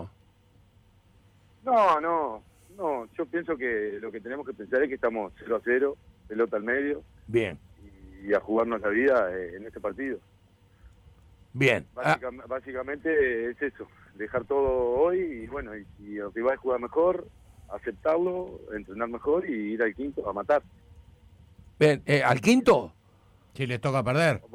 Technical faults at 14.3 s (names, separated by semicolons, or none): none